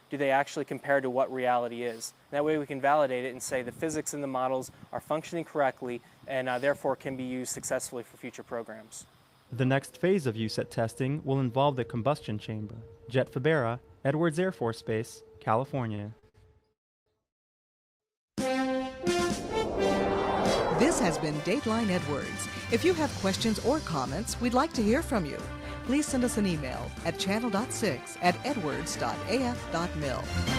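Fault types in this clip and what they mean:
Repeated stalls (stutter): Packets kept arriving late, so the jitter buffer emptied five times between 15.95 and 16.36 s. The receiver bridged each gap, the longest 55 ms, by stretching the last sound. About 148 ms was filled and nothing lost, so the audio drags and stutters.
Call audio freeze: Packets were likely held up in transit, draining the jitter buffer. The sound stops and goes almost silent for 340 ms at 16.72 s and for 715 ms at 17.28 s, then resumes where it left off, inserting gaps rather than dropping anything.
Jitter buffer speed-up: After the stalls the buffer held excess delay, so the receiver trimmed short pitch-period pieces repeatedly to catch up. At 20.88–21.93, 22.74–23.68, 24.43–26.43 and 27.34–28.66 s the audio runs 3 to 8 percent fast at unchanged pitch, the last stretch sounding hurried.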